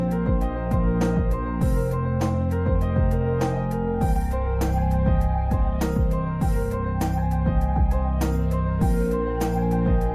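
No technical faults can be heard anywhere in the audio; the signal stays steady and intact throughout.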